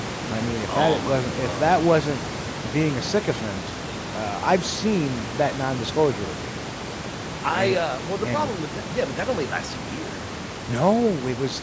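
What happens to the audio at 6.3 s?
Nothing goes wrong at 6.3 s: the speech carries on intact, with only the room noise sitting about 11 dB below it and the call microphone processing holding everything under 8 kHz, as it does normally.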